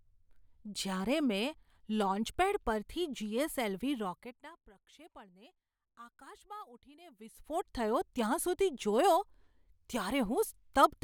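Speech, with zipper noise from 7.00 to 7.74 s, after "પ્રક્ષેપણને આકાશમાં" and before "થયો ત્યાં". The level shifts by about 25 dB in unsmoothed steps of about 1 dB, some fifty a second, each clicking faintly. The waveform shows a staircase envelope, and the spectrogram shows evenly spaced thin vertical lines.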